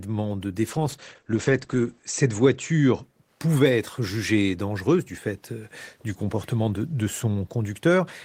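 From 0.66 s to 3.09 s, a call bitrate drop occurs: the connection's bandwidth estimate collapses and the Opus encoder is pushed onto a much smaller bit budget, which fits a fall from 32 kbps to roughly 14 kbps, held at its lowest for 1.26 s. With so few bits, the speech is coded coarsely and sounds rough and watery, and the audio band narrows from 20 kHz to 8 kHz, leaving it muffled until the bitrate climbs back.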